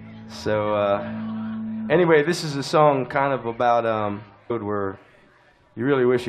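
At 4.49 s the sound jumps abruptly ahead with a brief blip, likely a stream segment skipped after failing to load, so the player continued from the next one.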